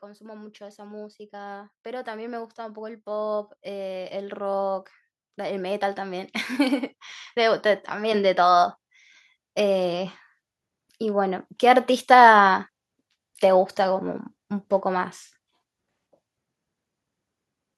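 Automatic gain rising runs from 0.05 to 8.75 s: the automatic gain control judged the speech input too quiet and slowly pushed its gain up by about 17 dB. Voice and background noise swell together across those nine seconds.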